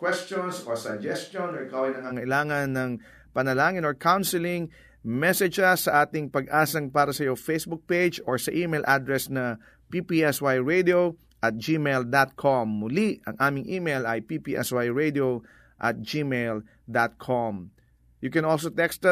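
From the very start until about 2.10 s, the speech sounds roomy and hollow, thinner in the bass, quieter by roughly 5 dB, with room noise about 35 dB below the speech. This is likely a switch to a distant microphone, the close microphone's signal missing for that stretch. At 2.10 s the sound snaps back to close and full. A waveform shows lower amplitude before that point, and a spectrogram shows weaker low frequencies and a raised noise floor, changing abruptly at 2.10 s.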